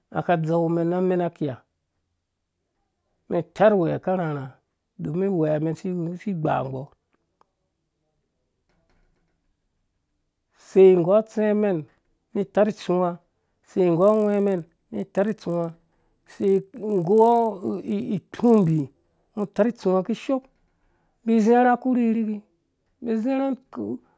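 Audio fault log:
13.98–19.64 s, resampler restarted on every block: the rate converter was reset for each 20 ms block, so every block edge was computed without its real neighbouring samples. Those edge errors repeat as a 50 Hz buzz heard over the speech.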